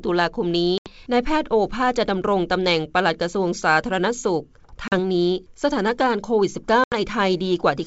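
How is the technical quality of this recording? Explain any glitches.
The recording has three short dropouts, caused by packet loss on an ADPCM call. At 0.78, 4.88 and 6.84 s, about 80, 40 and 80 ms of audio vanish as hard-edged silent gaps. These show as flat waveform sections and blank spectrogram strips. The decoder's predictor then falls out of step, so the speech returns slightly distorted after each gap before settling.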